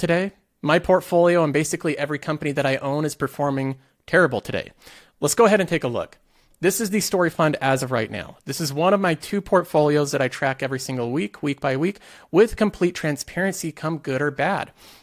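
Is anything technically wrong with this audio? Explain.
No, nothing technically wrong turns up in this speech recording, and the signal chain holds steady the whole way with no audible faults.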